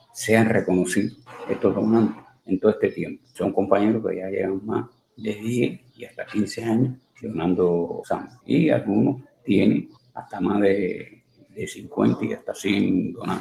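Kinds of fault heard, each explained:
Noise suppressor applied to music or sounds: A suppressor tuned for speech stays active through the whole clip. It treats steady tones, ambience and tails as noise and pulls them down. The attenuation keeps shifting, with a swing of around 20 dB. Sudden onsets pass more freely than held sound. So the level pumps and flutters from moment to moment. Sustained parts thin out, and decays are clipped short instead of fading naturally.
Sound cut by the noise suppressor: Here the suppressor cuts specific stretches harder than the rest. It happens from 0.0 to 0.16 s, with a drop of about 17 dB. It returns from 1.11 to 3.4 s, from 4.6 to 7.24 s, and from 8.25 s to the end, each dipping by about 19 dB at worst. In the middle spans, roughly one to one and a half seconds actually sink. Held and fading sound drops away most.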